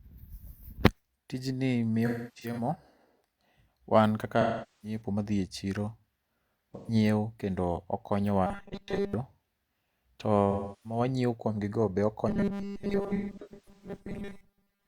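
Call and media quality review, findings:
Smeared, phasey speech with noisy dropouts, 2.06–2.70 s (about 384 ms lost across 512 ms, longest gap around 0.3 s). AAC frame loss with concealment: decoder rebuilds missing frames from the last good spectrum.

Same smeared, noisy patch, 4.41–5.01 s, about 427 ms lost. AAC frame loss with concealment, missing frames filled from prior spectral data.

Brief phasey smear, 6.76–6.94 s, just before "kendo okonyowa", 128 ms lost. AAC frame loss with concealment, decoder extrapolating the previous spectrum.

Rigid metallic buzz at a fixed 200 Hz, roughly following speech, 8.47–9.14 s, after "kendo okonyowa". Robotic sound from repeated short buffers, likely 5 ms chunks looped while most incoming audio is skipped.

Noisy, smeared stretch, 10.51–11.00 s, just before "wanyiewo kuom", about 341 ms lost. AAC frame loss with concealment, gaps patched from the last good spectrum.

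Fixed 200 Hz metallic buzz over speech, 12.29 s to end of clip. Robotic sound from repeated short buffers, likely 5 ms segments repeated in place of most real audio.

Overlapping smeared, phasey dropouts, 13.06–13.99 s (512 ms lost across 768 ms, longest gap around 150 ms). AAC frame loss with concealment on top of the buffer buzz.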